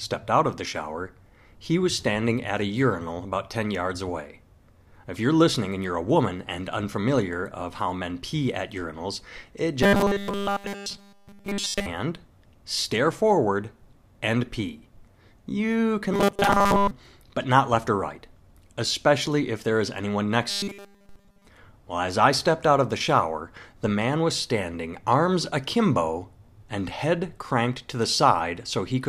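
Robotic sound from repeated short buffers appears three times: after "pee at urinals it" from 9.83 to 11.86 s, from 16.13 to 16.92 s just before "but not left or", and after "if there is anyone" from 20.49 to 21.47 s. The speech becomes a rigid 200 Hz metallic buzz, completely in the first and third spans and mostly in the second. The likely cause is audio arriving too slowly, with a 5 ms fragment looped to fill the gaps. On a spectrogram this shows as flat harmonic lines every 200 Hz, and the waveform shows a short cycle repeating at regular intervals.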